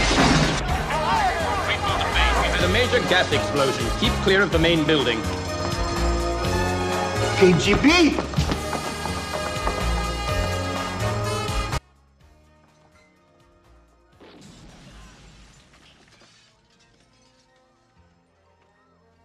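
At 11.78 s the sound drops out abruptly and never recovers, staying down to the end of the clip. This audio dropout to a faint residue leaves only faint sound, roughly 30 dB below the normal signal level, so the chain after the break was still live. The likely cause is a loss of the wanted feed upstream. Unlike a fade or natural pause, the level falls instantly.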